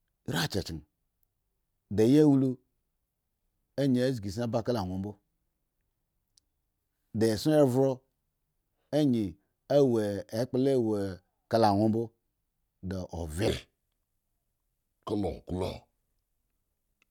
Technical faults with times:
13.48-17.11 section at the wrong speed

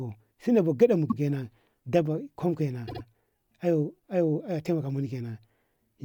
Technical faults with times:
1.09-1.17 repeated frames
2.87-3.01 repeated frames

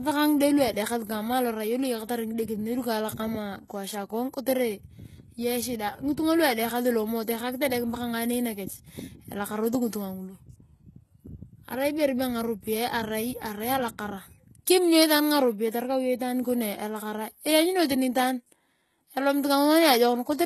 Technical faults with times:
0.00-20.46 HE-AAC compression

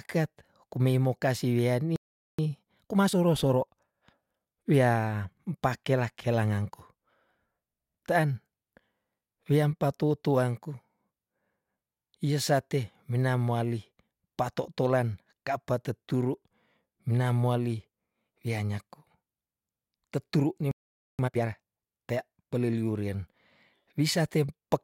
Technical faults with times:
1.96-2.39 playback stall
2.39-5.21 time-compressed catch-up
20.71-21.19 playback stall
21.19-21.65 time-compressed catch-up

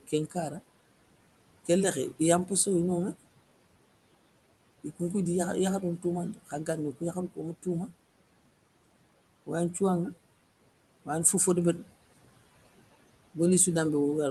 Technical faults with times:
0.00-14.31 noise suppressor artifacts
6.34-6.68 speech cut by the noise suppressor

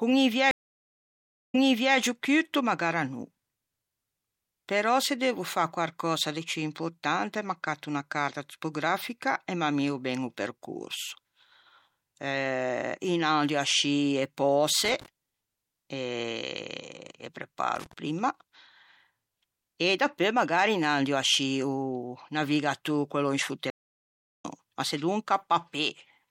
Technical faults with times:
0.51-1.97 stream reconnect
14.85-15.08 loose connector crackle
17.76-17.93 loose connector crackle
23.70-24.45 stream reconnect

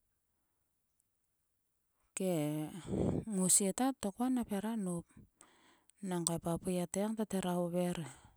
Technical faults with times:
none

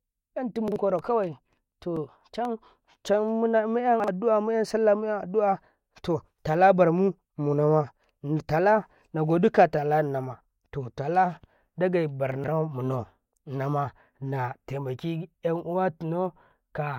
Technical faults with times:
0.68-0.76 chunks out of order
0.99-2.45 CD scratch ticks
4.00-4.08 chunks out of order
12.32-12.48 chunks out of order

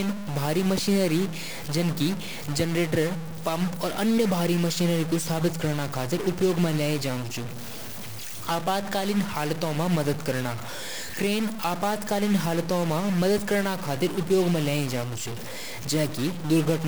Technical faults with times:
0.00-16.88 stuck bit

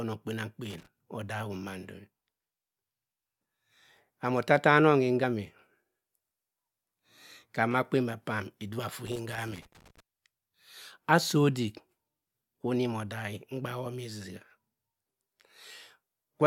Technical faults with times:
0.70-0.87 loose connector crackle
3.71 compressed frames skipped
5.23 compressed frames skipped
9.07-10.00 loose connector crackle

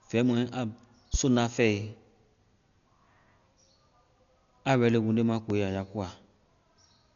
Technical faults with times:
0.00-7.15 Dolby Digital compression
1.14-1.17 loud pop
5.50-5.54 loud pop

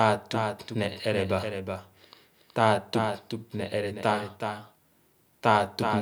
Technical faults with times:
0.00-6.02 doubled audio track

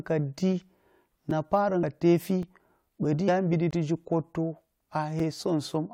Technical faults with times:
1.30 block of digital silence
1.82 compressed frames skipped
2.42 block of digital silence
3.27 compressed frames skipped
3.71 block of digital silence
5.20 block of digital silence

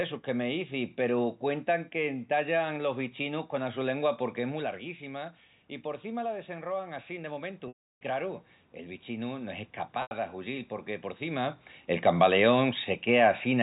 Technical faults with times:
7.68-8.01 packet loss with pitch repetition
10.02-10.11 packet loss with pitch repetition

